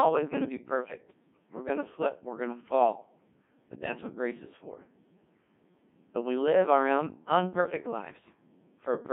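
Speech, carried throughout by a Codec 2 vocoder, with heavy damage. The voice is rebuilt from sine waves driven by pitch, voicing, energy and a coarse spectral envelope rather than a kept waveform, so it sounds buzzy and robotic. The sparse, smeared detail fits the 1.6 kbit/s mode, and the band sits between about 150 Hz and 3.5 kHz. From 0.85 to 0.98 s, between "going to be" and "we're going to slip", bit errors on digital voice radio break the sound into a short warbling, pitch-jumping burst with abrupt shifts in level and tone colour. At this bitrate each corrupted bit redefines a whole frame's pitch, loudness, voicing or spectrum. The roughly 0.13 s disturbance points to a couple of consecutive frames being hit, with an error rate on the order of several percent.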